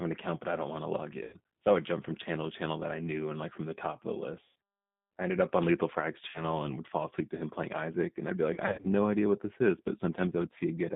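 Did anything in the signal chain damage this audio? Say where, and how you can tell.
Yes. The G.729 codec degrades the whole clip at the codec stage. The speech sits in a narrow 150 Hz to 3.7 kHz band at 8 kbit/s and sounds rough and synthetic, because each frame is rebuilt from a vocal-tract filter, a pitch predictor and sparse pulses.

VoIP packet loss concealed by the speech codec, at the network stage, occurs at 1.24–1.36 s after "don't want to log", 4.44–4.54 s, 6.28–6.54 s before "and would fall asleep", and 8.54–8.86 s between "I'd be" and "idea what this is". The decoder stretches its last pitch and filter into a fading buzzy tone or coloured noise.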